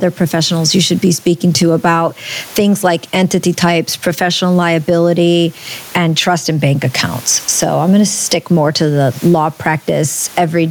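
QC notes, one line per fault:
Throughout, gain pumping: the room noise sits about 36 dB below the speech, and the gain swings by roughly 15 dB, leaving loud and soft passages squashed together. The likely cause is gain set far too high, with a fast limiter clamping each loud sound. A waveform shows a flattened envelope.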